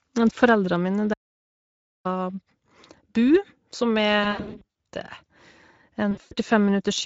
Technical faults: Speex codec; audio dropout to silence; VoIP packet loss concealed by the speech codec

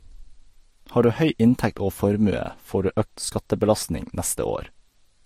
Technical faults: transcoding between lossy codecs

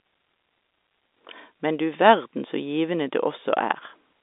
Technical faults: none

